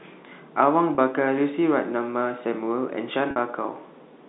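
At 0.95 s and again at 3.31 s the speech hits packet loss with pitch repetition: audio goes missing and the receiver fills the hole by looping the last pitch period. The first gap lasts 30 ms, the second 50 ms, which fits runs of about three and five 10 ms packets. Each sounds like a brief buzzy hold on the narrowband telephone sound. On a spectrogram, evenly spaced harmonics freeze flat across each gap; the waveform shows repeating cycles that fade out.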